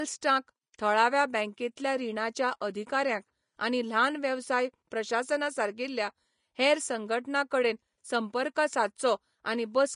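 From start to finish, the speech carries plainly audible damage that is likely Vorbis compression at a low setting, which fits a bitrate of about 36 kbps. Nothing is left above 10.5 kHz, and the treble below that edge is quantised so coarsely that its fine detail has turned into hiss of similar energy. Consonants sound grainy and vowels roughened. A plain low-pass filter would dull the sound without adding this noisy texture.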